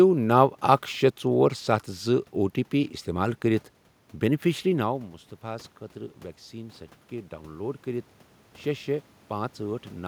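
From 6.51 s to 10.03 s, automatic gain rising is heard. The input had dropped by about 13 dB. The gain control answered by slowly raising its level about 5 dB. Voice and room noise swell together over those seconds.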